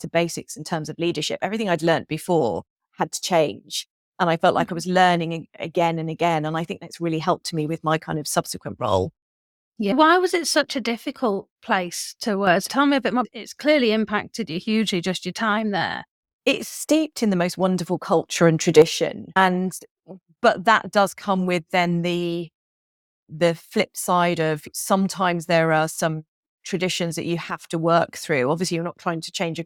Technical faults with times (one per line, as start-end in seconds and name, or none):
12.47-12.65 sudden gain jump
18.36-18.82 sudden gain jump
27.50-27.64 sudden gain jump